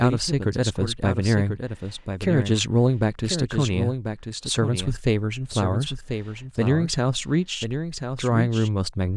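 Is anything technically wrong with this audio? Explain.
Yes. Throughout the speech, a dry, full-band echo of everything trails the original by about a second, roughly 10 dB quieter and with no decay or room colour. This doubled audio track is likely the same signal captured again through a slower path.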